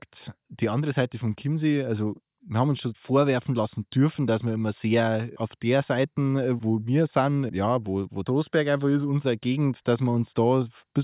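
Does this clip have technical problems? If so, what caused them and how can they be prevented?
No, the recording has no technical problems that call for a cause or a preventive fix.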